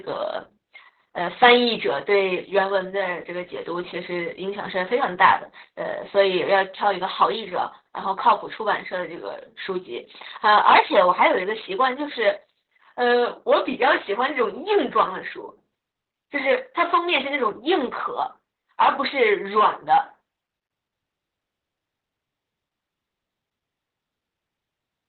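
Opus voice compression runs throughout: the speech is narrowed to about 4 kHz and sounds hoarse and robotic, which fits roughly 8 kbps, unlike plain low-pass muffling.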